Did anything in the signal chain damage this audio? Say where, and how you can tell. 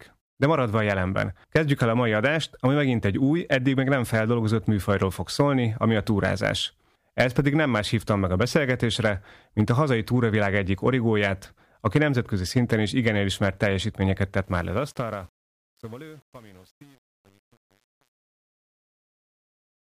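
Yes, truncation distortion on a fade, at the sample-format conversion stage: from 14.44 s the fade-out turns gritty, and from 15.04 s to the end it is at its worst, consistent with about an 8-bit word without dither. The waveform shows square steps; the spectrogram shows broadband hash.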